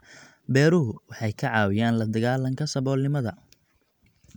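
At 0.96 s a corrupt frame decoded: flipped bits in what sounds like a couple of compressed frames were played back anyway, so misread gains and codes put energy at wrong frequencies. It is heard as a brief, faint glitch in the speech, peaking at roughly -50 dBFS.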